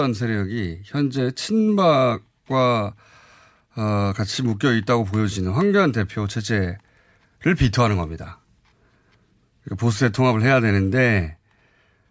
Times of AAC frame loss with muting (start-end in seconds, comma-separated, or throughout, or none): none